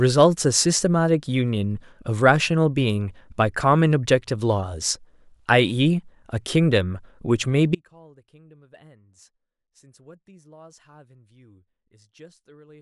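At 7.75 s the speech suddenly drops out to a faint residue, and it stays that way to the end of the clip. It is not a pause or a fade. The level collapses in an instant. What remains is a faint leak of the signal, roughly 30 dB below normal. The likely cause is a break in the wanted signal path, while the chain after the break stayed live and kept passing that weak trace.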